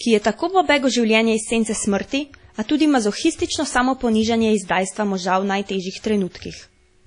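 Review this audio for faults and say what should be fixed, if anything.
Throughout the speech there is washy ringing, a hiss that breathes with the signal, and nothing above 10.1 kHz. This is likely WMA compression at a rate that fits 32 kbps, with long transform blocks smearing quantisation noise. A plain low-pass filter would cut the top without this pumping hiss. Encode at a higher bitrate or from an uncompressed master.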